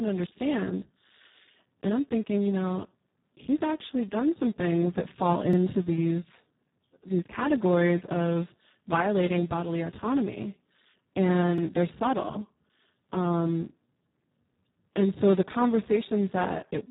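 Speex codec damage runs through the whole of this speech recording, and it is heavy: the voice sounds hoarse, noisy and robotic because the CELP coder had very few bits for the excitation, which fits a rate around 4 kbps, and nothing remains above 3.9 kHz. Overlapping chunks show at 5.53 s and 11.58 s, where about 48 ms of audio plays twice, producing a stutter at each join. The joins fall 6 s apart because each 6 s chunk began before the previous one had finished.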